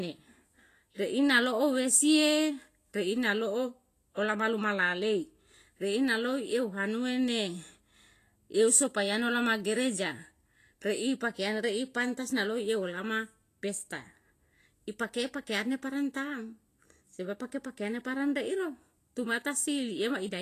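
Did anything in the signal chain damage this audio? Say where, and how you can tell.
Yes, the codec stage is the likely culprit: a low-quality Vorbis compression pass runs through the whole speech clip. Nothing remains above 14.2 kHz, a hard ceiling the encoder imposes to save bits, and the treble beneath it is rendered as grainy hiss, because fine detail there was quantised so coarsely it turned into noise of similar energy. Consonant attacks sound smeared and tones roughened, which fits a bitrate around 34 kbps.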